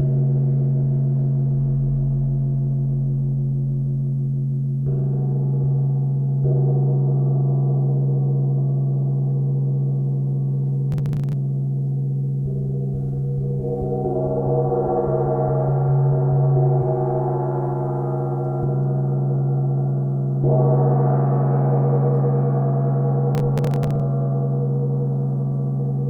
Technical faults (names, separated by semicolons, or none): processor overload crackle